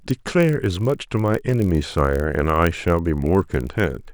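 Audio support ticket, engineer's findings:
Steady buzz at about 46.9 Hz across the whole speech clip, consistent with a block size mismatch (padded) between buffer stages. Writer delivers blocks slightly short of what the reader takes, and zero-fill closes the gap in every block, giving a brief dropout per block. Buzz rate fits 1024-sample reads at 48 kHz. Playback runs at 0.999x speed. Check block length agreement at the stage boundary.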